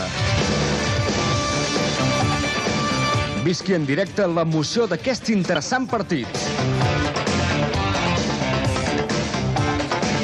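At 5.56 s there is a brief blip caused by damaged data in a compressed stream. Corrupted bytes left the decoder unable to read the frame at that point, so it lost sync and searched for the next valid header, producing a momentary glitch.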